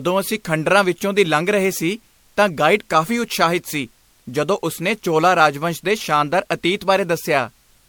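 Throughout the speech, generation loss is audible as swirly, smeared, hollow tone with blurred consonant attacks, likely from around seven passes through an MP3 codec near 96 kbit/s. A spectrogram would show patchy spectral holes and smeared onsets, with nothing above 19.9 kHz.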